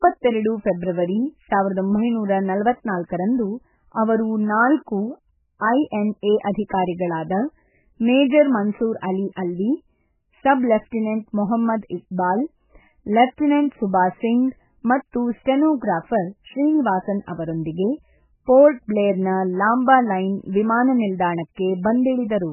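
It's a speech clip, and the whole thing has that heavily squashed, watery sound: nothing comes through above about 3 kHz, and the quieter detail flickers in and out so the voice swirls and s sounds go dull and chirpy. That's most likely MP3 compression pushed very hard, with the encoder chopping off the treble and dropping weak frequency lines frame by frame. The damage level fits a tiny bitrate, something around 8 kbps.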